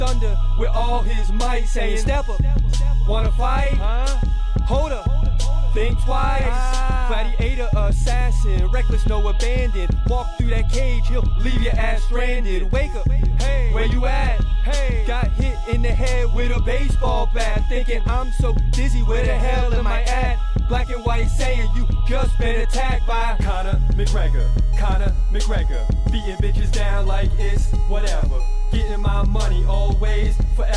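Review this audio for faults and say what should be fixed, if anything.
No faults; nothing to fix.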